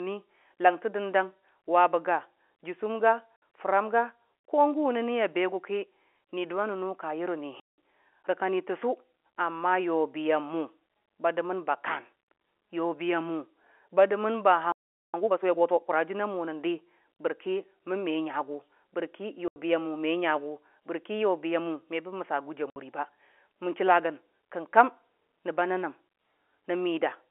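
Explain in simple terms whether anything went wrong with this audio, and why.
Something went wrong in three ways. The clip is speech heard over a telephone line, and the speech keeps breaking up.

The first problem is packet loss filled with silence. The sound travels in small chunks, and here each chunk seems to hold about 20 ms. Some chunks never arrived, and the receiver played silence in their place. That leaves short holes with sharp edges. The first hole is at 3.40 s, just after "jʊsʊm ga" and before "fəram ga ko", and lasts about 60 ms. The longest runs from 7.60 to 7.75 s and lasts about 180 ms. Another runs from 19.48 to 19.56 s. The last runs from 22.70 to 22.76 s, right after "gʊji a".

The second problem is a playback stall. From 14.72 to 15.14 s the sound simply stops for about 0.4 s, in the middle of the flow. The likely cause is that the player ran out of audio to play, or that it was briefly blocked. 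It then picks up again.

The third problem is a time-compressed catch-up. The player had fallen behind, so from 15.14 to 15.96 s it plays at 1.5 times normal speed. It does this by cutting out tiny slices and blending the edges together. The pitch stays normal, but the speech sounds hurried.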